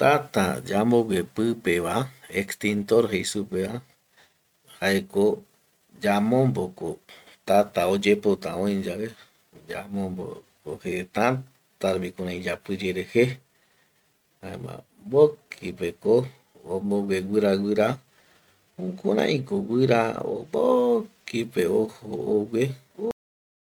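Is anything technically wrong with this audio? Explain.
Yes, the speech has a cut-off end. At 23.11 s the sound stops mid-utterance and drops straight to digital silence with no natural decay, which remains to the end of the clip. The final buffers were never written or played out, so the remainder is simply missing.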